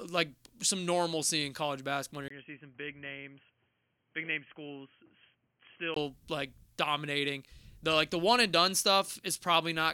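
The input likely switched to a poorer device after "normalcy in college basketball" at 2.28 s. A 20 ms gap opens, then the speech turns boxy, cut off above 3.2 kHz, a few decibels quieter with faint added background noise, until "like dominating" at 5.96 s.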